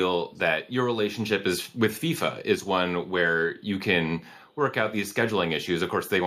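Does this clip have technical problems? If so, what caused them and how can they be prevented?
Yes. Faint echo leak appears at 1.68–1.79 s, 3.06–3.11 s, 3.57–3.62 s and 4.35–4.59 s: short scraps of the speech returning 412 ms late, very quiet beneath the live speech. Likely a far-end loudspeaker whose echo canceller let residual pickup through. Unlike room reverberation, which trails smoothly from each sound, these are separate, fixed-delay copies that come and go. Using a headset, or better-adapted echo cancellation, would prevent it.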